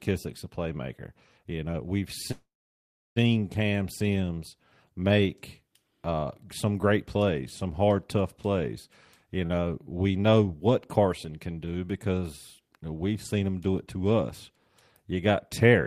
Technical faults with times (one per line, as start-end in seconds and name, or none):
2.31-3.18 call audio freeze
9.46-9.52 short stall from a late packet